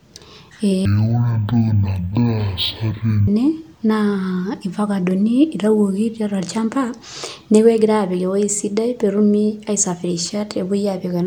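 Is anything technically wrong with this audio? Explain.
Yes. From 0.85 to 3.28 s the speech suddenly drags at half speed and drops a full octave, 12 semitones, sounding slow and deep. This is stereo read as mono: interleaved left and right samples were played back sequentially as one channel, doubling each stretch's duration.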